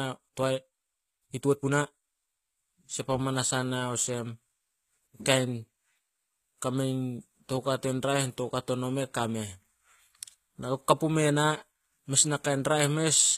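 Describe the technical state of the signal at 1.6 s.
At 1.6 s the speech falls inside a time-stretched section running from 0.0 to 2.08 s, where the delivery is sped up about 1.44 times while pitch holds steady. This is likely the work of stretching software squeezing the passage to fit a length by dropping short slices of audio. It sounds rushed. On a waveform, syllables look compressed and crowded, and a spectrogram shows harmonic tracks at normal spacing but shortened in time, with small seams where pieces were cut.

The same moment also carries HE-AAC compression, present across the whole clip and plainly audible. The damage is likely from an encoder coding only the lower spectrum and rebuilding the treble by copying lower bands upward, which fits a bitrate around 20 kbps. The s sounds come out gritty and metallic because the copied harmonics do not line up with the real ones. A spectrogram shows repeated, blocky texture in the upper bands and nothing above 14.9 kHz.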